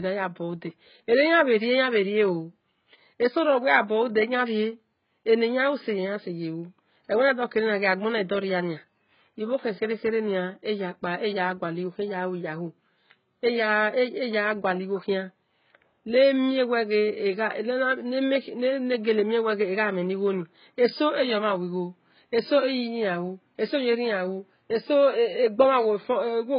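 Throughout, the speech stops at 5.1 kHz and sibilants warble and fizz, likely heavy AAC compression; a plain low-pass would sound dull but clean.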